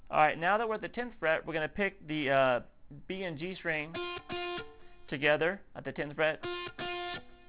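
Aliasing runs through the whole clip. The audio was downsampled without a proper low-pass first, which points to a drop to around 8 kHz sampling, so content above 4 kHz folds back down as stray, unrelated tones roughly 25 dB under the signal, giving the top end a gritty, metallic edge.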